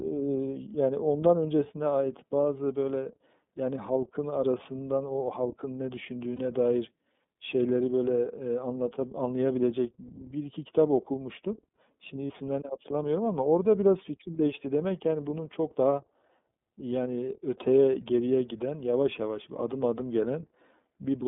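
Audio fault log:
throughout iLBC codec. The speech is narrowband, with nothing above about 3.6 kHz and a thin low end below about 200 Hz. It sounds clear but rough and slightly synthetic. Each 30 ms frame is coded on its own, and the bitrate points to the 13.33 kbps mode.
6.36 s and 12.27 s lost iLBC frames. In each place one 30 ms frame goes missing. The decoder fills the gap by repeating the last pitch cycle mixed with noise. It sounds like a brief held, buzzy vowel. Because frames stand alone, the speech recovers straight away.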